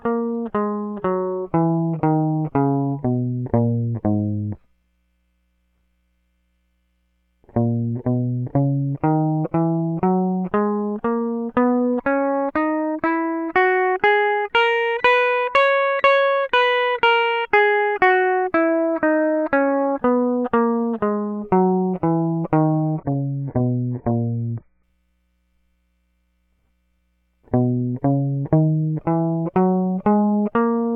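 From 22.83 to 24.83 s the adaptive stream dropped to a lower bitrate, consistent with a step from roughly 96 kbit/s down to about 12 kbit/s AAC. For those two seconds the music turns smeared with codec artefacts, then snaps back without a gap.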